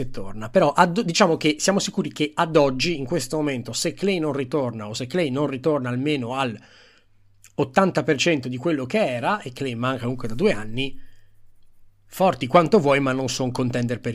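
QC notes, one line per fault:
No faults heard anywhere in the speech.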